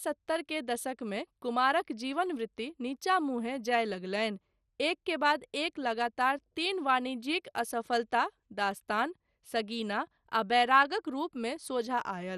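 From start to finish the speech carries MP2 compression damage, likely from MPEG Layer II coding at a low rate. The sound fits roughly 64 kbps. Starved upper sub-bands are switched off. Nothing remains above 14.2 kHz. The result is dull, with a plainly audible gurgling, granular roughness.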